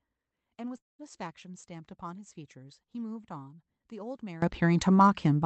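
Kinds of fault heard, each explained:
Long network dropout: At about 0.77 s the speech cuts out and roughly 0.22 s of it is simply gone. The receiver stretches the last sound into a fading buzz, then near-silence, before audio picks up again around 1.01 s. A network stall is the likely cause.
Sudden gain jump: At 4.42 s everything leaps up by about 20 dB in a single step and stays there to the end. Speech and background noise rise together with no ramp, likely a digital gain change applied instantly.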